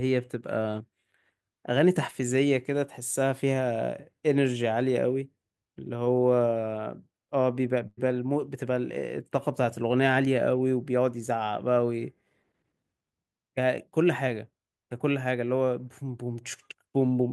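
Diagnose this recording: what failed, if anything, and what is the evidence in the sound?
The network stage dropped a burst of packet loss at 7.87 s, running to 7.99 s, roughly a tenth of a second of speech that never reached the receiver in time. The decoder's concealment stretched the last received sound across the gap for about 98 ms, fading it as it went, so a held buzz or decaying hiss stands in for the speech. When packets resume, about 100 ms of the original is simply gone.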